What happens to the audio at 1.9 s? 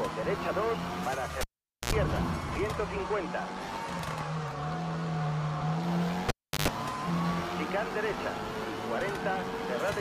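At 1.9 s the sound is returning from a cable pulled and plugged in, spanning 1.41 to 1.93 s: a pop, about 0.47 s of near silence, then 75 ms of 60 Hz mains buzz as the plug tip touches, and a second pop. Unlike a plain dropout, it has that hum burst and the paired pops.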